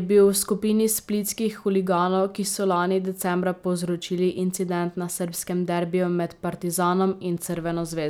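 Nothing in this bit of speech trips any technical alarm, so there's really no fault here to point at.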